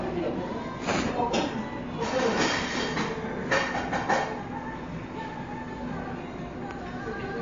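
MP3 compression damage runs throughout the clip. Nothing is present above about 7.2 kHz, so the top end sounds dull and closed off, and the remaining detail has a watery, swirling quality, with faint components flickering in and out and sharp onsets smeared. This is likely a bit-starved MP3 encode, at a rate that points to around 48 kbps. The encoder cut the treble at a fixed point and dropped weaker frequency content from frame to frame.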